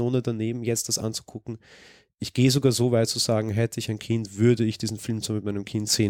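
Listening closely to the speech recording, nothing stood out as a technical fault at any point.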